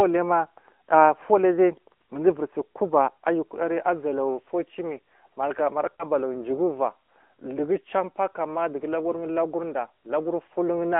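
From start to finish the speech passes through the AMR narrowband mobile codec. Its 8 kHz sampling leaves nothing above 4 kHz, and the line shaping narrows it further to roughly 250 Hz to 3.4 kHz, so the voice sounds thin and boxy. The vocal-tract model fed by sparse pulses adds a plainly audible buzzy, synthetic edge, which fits a mid-range mode near 10.2 kbps. On a spectrogram the energy stops at a hard ceiling near 3.4 kHz with an empty band above it. The low end is also bare below about 250 Hz.

From 5.96 to 6.04 s there is a lost AMR speech frame. A frame failed its radio checksum, and the decoder bridged the gap by repeating the last good pitch and spectral settings at reduced gain. The result is a brief dip or warble, and the voice returns weak or rough for a moment. This fits a single lost 20 ms frame plus its recovery. The waveform shows a short amplitude sag there, and the spectrogram shows smeared, repeated harmonics instead of normal movement.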